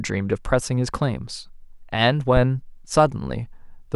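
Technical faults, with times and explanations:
2.37–2.44 s, phantom power thump: a supply switched on or off on the live input pushes a voltage step through the coupling capacitors, heard as a deep thump peaking at about −8 dBFS and decaying in 15 ms; the waveform shows one large slow swing, the spectrogram a brief low-frequency blob.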